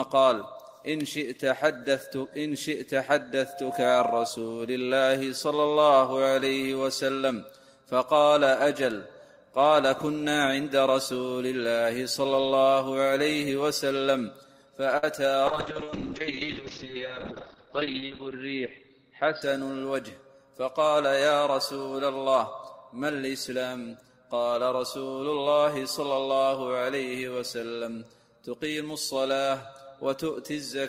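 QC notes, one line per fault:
14.97 to 15.04 s: short stall from a late packet. A packet arrived late, the jitter buffer emptied, and the receiver stretched the last sound by 54 ms before resuming at the same point, so nothing is lost but one sound lingers with a faint buzz or dip.
15.48 to 19.73 s: call bitrate drop. The bandwidth estimate fell and the encoder went from 32 to 9 kbps, sitting at the bottom for about 2.75 s, with the audio band narrowed from 20 kHz to 6 kHz, so the sound turns coarse, watery and muffled until the rate recovers.
17.01 to 18.23 s: jitter buffer speed-up. The buffer was holding more audio than its target, so the receiver trimmed short pitch-period slices repeatedly, removing roughly 70 ms in total, and the audio plays about 4% faster at unchanged pitch.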